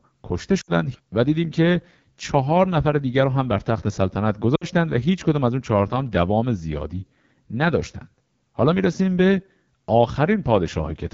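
AMR wideband (HD Voice) codec damage runs through the whole of this speech recording. The voice sounds rough and raspy, which points to one of the low AMR-WB rates, around 8.85 kbit/s. At that rate the pulse-driven vocal tract model is too coarse to capture detail. Lost AMR speech frames occur at 0.61 to 0.71 s and again at 4.56 to 4.66 s, each about 60 ms long. The decoder filled each gap by repeating the last good pitch and vocal tract settings at falling gain, so the sound drops to near silence within two frames before rough speech returns.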